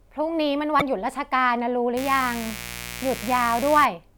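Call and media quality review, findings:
Damaged data in a compressed stream, 0.77 to 0.83 s: brief glitch. Decoder misreads corrupt frames, loses sync, hunts for the next header. Spectrogram: short broadband smear; waveform: abrupt discontinuity.

Mains buzz, 1.97 to 3.86 s: steady raspy buzz under the speech, fairly loud, roughly 10 dB below it. Switching spikes at twice per 60 Hz cycle; probable dimmer, rectifier or unshielded cable. Spectrogram: evenly spaced 60 Hz harmonic lines reaching several kHz.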